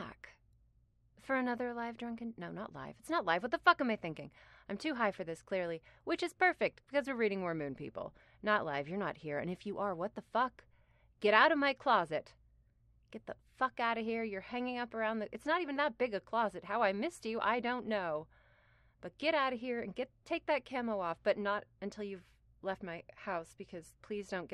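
Nothing stood out as a technical fault on listening to this recording.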